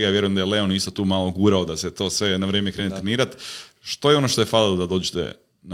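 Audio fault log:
2.75–2.80 s, damaged data in a compressed stream: a brief glitch as the decoder misreads corrupt frames and resyncs.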